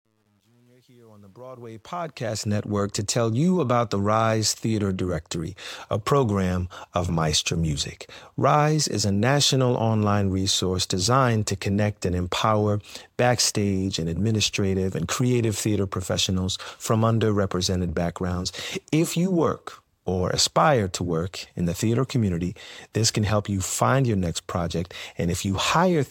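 From 0.0 to 2.50 s the fade-in shows truncation distortion, gritty to about 1.68 s, fitting an undithered 10-bit stage; unlike gating, the grain clears as level rises.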